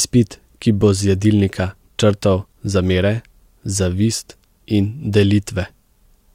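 No technical faults are present in this recording; the signal carries the speech without any audible disturbance of its own.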